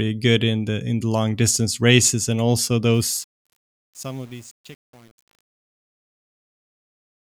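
Right after "distance races and also", at 2.94 s, the fade-out starts showing truncation distortion on a fade, running to the end at 7.34 s. The fade stage is only keeping about 8 bits with no dither. As the level drops, the waveform collapses into coarse steps. From 3.26 s onward it gets gritty instead of trailing off cleanly.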